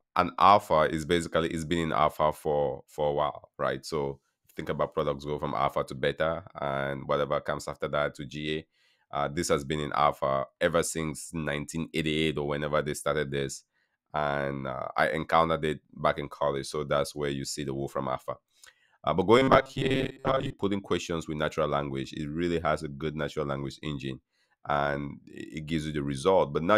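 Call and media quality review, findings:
Robotic sound from repeated short buffers, 19.38–20.53 s: metallic buzz near 134 Hz, most audio replaced. Likely jitter buffer underrun looping roughly 7.5 ms chunks.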